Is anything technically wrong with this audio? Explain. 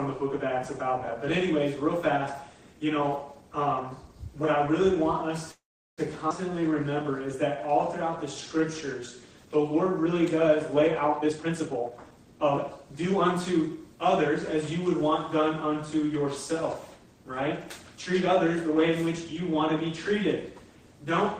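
Yes, four timing faults disturb the playback.

Call audio freeze, 5.51 to 6.01 s: the sound stops moving forward for about 0.46 s. A short tail of the last sound trails off, then roughly 0.38 s of silence follows before playback resumes right where it left off, with nothing lost. The likely cause is packets held up in transit, so the jitter buffer ran dry and the receiver filled the wait until they arrived.

Skip ahead, 6.30 to 6.33 s: playback jumps forward with only a few milliseconds of fill, cutting out about 150 ms of audio. The material on either side of the cut is butted together almost directly. This happens when a stretch is discarded, either lost on the way or dropped by an overfull jitter buffer, while later audio is already queued and ready to play.

Jitter buffer slow-down, 6.53 to 9.20 s: the audio runs at about 94% speed with its pitch unchanged, and sounds are drawn out. 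Running low on reserve, the buffer repeated single pitch periods and small pieces of pauses many times in succession. Across this stretch those repeats add 163 ms, rebuilding the cushion it needs.

Jitter buffer speed-up, 11.19 to 13.06 s: the audio plays at about 125% speed, pitch intact, and sounds noticeably hurried. The buffer was holding more than its target, so it trimmed short chunks of one or a few pitch periods over and over. Together those cuts remove about half a second to bring the delay back down.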